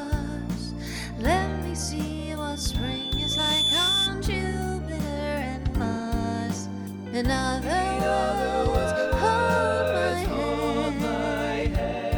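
From 2.37 s to 4.15 s there's loudspeaker feedback squeal: a single tone at 3.5 kHz swells over about a second and a half until it sits roughly 5 dB above everything else. The mic is hearing its own speaker, and at that frequency the loop gain has tipped past one.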